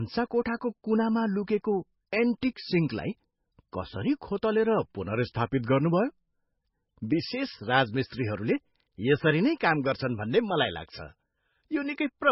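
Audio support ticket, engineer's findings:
Watery, swirly sound throughout, heavy damage, nothing above 5.6 kHz. Likely MP3 compression at a bitrate near 17 kbps: encoder cutting treble, zeroing weak frequency lines.

Short hiss before a smeared attack at 2.41 s, spread about 15 ms. Pre-echo: the codec block spreads quantisation noise ahead of the sharp onset.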